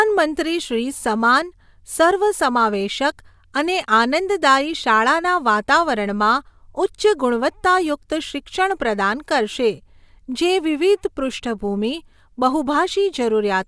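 Aliasing runs throughout: unfiltered downsampling folds energy back below 11 kHz, roughly 25 dB down, making sibilants gritty; the spectrogram shows mirrored streaks cut off there.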